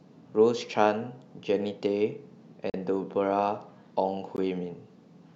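Speech with two brief silent gaps, 40 ms at 2.70 to 2.74 s and a shorter one at 4.36 s, likely Bluetooth stalls, as audio cuts to silence and then picks up again.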